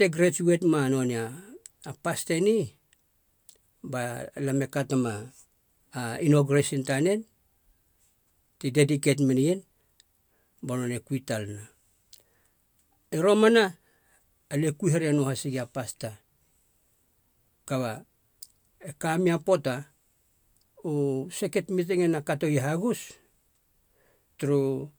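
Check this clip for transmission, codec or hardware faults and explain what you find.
Nothing in the speech signal points to any transmission, codec or hardware fault.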